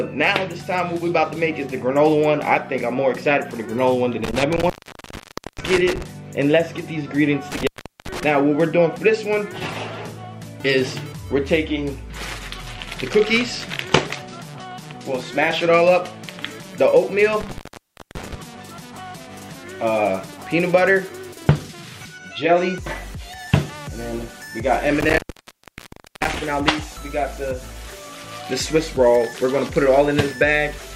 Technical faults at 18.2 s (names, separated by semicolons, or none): intermittent contact